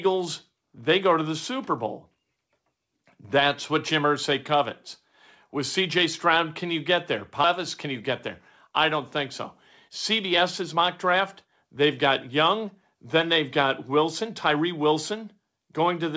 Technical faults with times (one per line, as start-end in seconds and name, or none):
7.44 skip ahead
7.60-8.13 jitter buffer speed-up
8.66-8.99 jitter buffer speed-up
9.88-14.92 jitter buffer speed-up